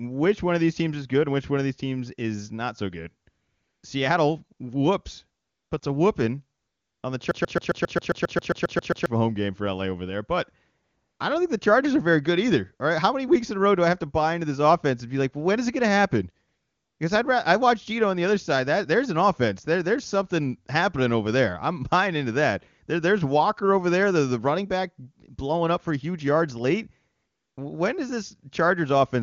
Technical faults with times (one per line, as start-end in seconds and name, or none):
3.29-3.83 AMR comfort noise
5.41-5.81 AMR comfort noise
6.59-7.03 AMR comfort noise
7.31-9.06 broken-record loop
10.83-11.19 AMR comfort noise
16.47-16.99 AMR comfort noise
27.15-27.57 AMR comfort noise